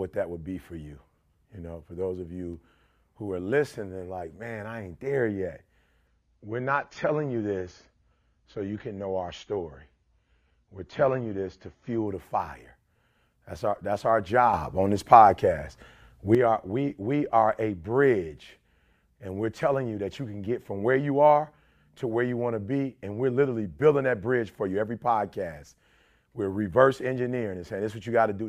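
At 6.07 s, just after "I ain't there yet", the speech drops to a lower bitrate in the adaptive stream. The connection likely slowed, and the player switched to a leaner version with no gap. The change is abrupt. Nothing above about 7 kHz remains, so the speech turns dull. Codec artefacts thicken. The sound points to a fall from around 96 kbit/s to about 24 kbit/s AAC. Full quality returns at 12.07 s, before "the fire".

At 14.54 s, after "our that's our", a sudden gain jump lifts the level by about 8 dB. The speech and the background noise rise together, instantly, with no ramp. The cause is likely a digital gain setting applied in a single step between samples. The raised level holds until 16.35 s, where it drops back just as abruptly. The words "are we we are" follow.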